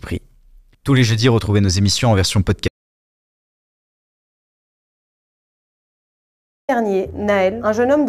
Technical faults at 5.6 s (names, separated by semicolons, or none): audio dropout to silence